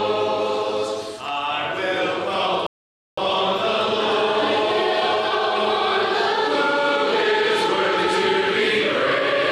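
At 2.67 s the player runs out of downloaded audio and halts, a rebuffering stall, until more data arrives at 3.18 s. The sound drops to silence for about half a second, then picks up exactly where it stopped, nothing skipped, only 0.51 s of delay added.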